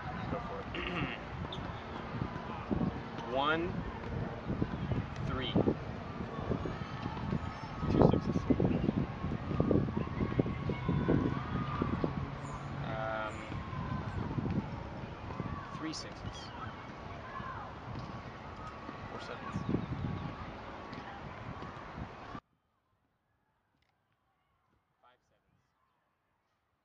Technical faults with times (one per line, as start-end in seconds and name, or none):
22.39-26.84 audio dropout to a faint residue